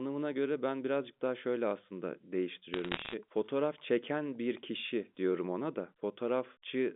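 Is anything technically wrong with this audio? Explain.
Yes. From 2.74 to 3.13 s the speech picks up a burst of sharp ticks and crackle. These are bit errors on a digital phone line, with a rate under one percent on what sounds like a G.711 line. Each flipped bit corrupts a single sample, and hits on high-order bits, or on the sign of a loud sample, jump far enough to click over the otherwise intact voice.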